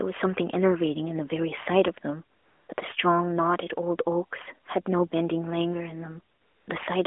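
Speech carried over an AMR narrowband mobile link, band-limited to roughly 300 Hz to 3.4 kHz with light codec colouring, shows AMR comfort noise in three pauses: 2.38–2.68 s, 2.74–2.78 s and 6.36–6.68 s. In each gap, the sender treated the signal as silence and stopped sending speech frames, and the receiver filled the space with smooth, steady synthetic hiss. Unlike a dropout or noise gate, the gap is filled with noise rather than dead silence, and its texture is visibly smoother than the real background around it.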